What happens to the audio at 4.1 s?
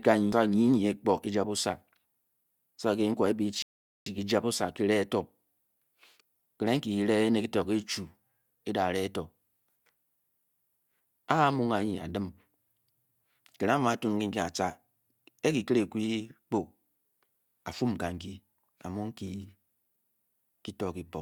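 A rebuffering stall ends right around that point. The player used up the audio it had downloaded at 3.62 s and had to wait for more data before carrying on, so playback halts into silence until 4.06 s. At 4.1 s the speech has just picked up again from exactly where it broke off, with nothing skipped. The gap adds about 0.44 s to the running time, and you hear it as an abrupt, dead pause rather than a dropout.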